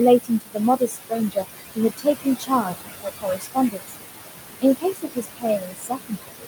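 Throughout the clip, noise suppressor artifacts are present. The suppressor pulls down the bands it judges to be steady noise by about 19 dB, so the room noise, which sits only about 6 dB under the speech, drops away in the gaps and comes back under each syllable. Unlike a noise gate, which switches everything off at once, this reduction works band by band.

The same processing produces speech cut by the noise suppressor in three stretches: 0.19 to 1.45 s, 1.75 to 3.95 s, and 4.62 s to the end. Because the speech is barely louder than the background, parts of it get classed as noise and pushed down with it, by up to about 22 dB in the first stretch and about 21 dB in the others. About 0.7 s of the first span and roughly a second of the second are affected. Soft consonants and word endings there sound swallowed rather than clipped off. A dropout would leave abrupt silent holes, while this loss follows the quiet parts of the speech.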